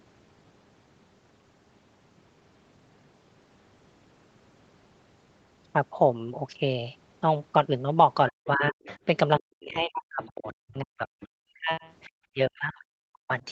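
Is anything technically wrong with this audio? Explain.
Yes. The speech has two related problems in its last five seconds, both from the call's echo handling.

Speech suppressed in double talk occurs at 8.3–8.88 s, 9.39–11.08 s, 11.35–11.85 s and 12.32–13.43 s. The talker's level repeatedly dips by as much as about 40 dB, in pieces, for roughly a second and a half in the longest stretch. The likely cause is an echo canceller that heard both sides at once, could not separate the talker from the loudspeaker echo, and turned everything down. Unlike a network dropout, these are gain ducks that come and go with the overlap, not clean gaps.

The other side's voice leaking through appears in brief scraps at 8.87–8.98 s, 10.23–10.32 s, 10.48–10.55 s and 11.2–11.28 s. Each is a faint second voice, about 20 to 25 dB below the talker. This is likely residual loudspeaker sound that the echo canceller failed to remove from the microphone. 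It differs from room reverberation because it is a separate voice, not a smeared tail of the talker, and it sits among the suppressed stretches. The high-pass call processing and the absence of content above 8 kHz are normal.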